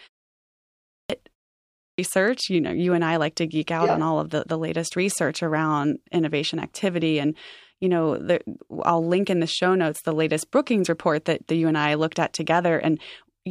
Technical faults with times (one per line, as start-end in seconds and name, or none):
0.75-1.10 clipped start after a pause
1.60-1.98 clipped start after a pause